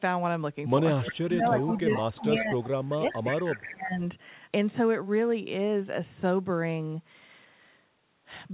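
Right at 1.03 s there's a short echo leak, a delayed copy of the talker arriving about 357 ms late and maybe 10 dB under the live speech. What's likely happening is a far end on speakerphone whose echo canceller let some of its mic pickup slip back through. It pops up again at 1.6 to 1.8 s (quieter, around 15 dB down), 2.63 to 2.9 s (down near 20 dB) and 3.11 to 3.33 s (back up to about 10 dB down). Every time it sits at that same 357 ms lag, so it comes across as a ghostly trailing repeat.

Overlapping that, from 1.11 to 2.55 s and again from 2.88 to 4.02 s, you get speech suppressed in double talk. The level sags by as much as 20 dB in places, and the talker goes patchy and muffled for roughly a second and a half in the first stretch and about a second in the second. That's most likely the canceller failing to separate its own talker from the returning echo while both were active, so it ducked everything.

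Beneath all of this, the audio stops dead at 4 kHz, which points to G.711 at 64 kbps.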